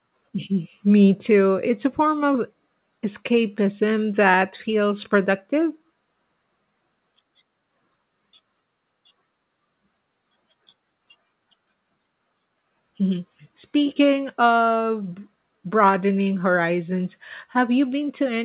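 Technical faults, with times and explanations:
Nothing stood out on listening to this speech beyond the narrowband, telephone-like sound of the call path, which carries nothing above 4 kHz.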